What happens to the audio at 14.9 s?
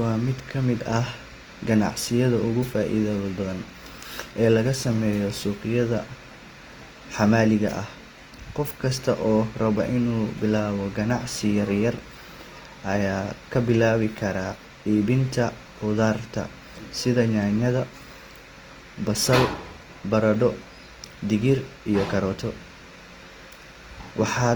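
At 14.9 s, as throughout the clip, Opus compression is plainly audible, likely from a low bitrate near 24 kbps in music mode. Starved bands are refilled with folded or noise content, so the speech sounds rough and grainy while still reaching about 20.2 kHz.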